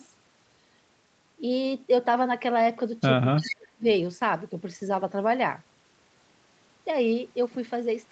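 At 3.37 s the speech starts to sink. For half a second, to 3.87 s, it dips hard, by around 40 dB at its deepest. This is speech suppressed in double talk. Both ends were likely talking at once. The echo canceller could not tell this talker from the loudspeaker echo, so it turned everything down together.

Inside that stretch, from 3.42 to 3.55 s, an echo leak appears. A delayed copy of the speech comes through, lagging by 341 ms. It sits roughly 10 dB under the direct speech. The loudspeaker side's canceller likely failed to remove all of what its microphone caught from its loudspeaker, and the leftover was sent back.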